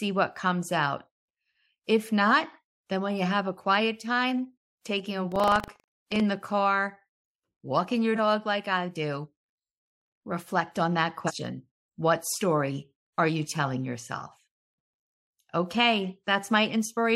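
Buffer tearing runs from 5.28 to 6.21 s, between "quiet time taking a" and "the car". The playback writer and hardware reader have slipped so each period carries a small slice of audio roughly 70 ms old, joined hard on both sides, giving a robotic 25 Hz buzz under the speech.

Compressed frames skipped occurs at 8.15 s, after "walking your" and before "like I do", and again at 11.26 s, after "reflect on that". The first loses a single 46.4 ms frame and the second around three frames, roughly 150 ms. Each time the speech jumps forward.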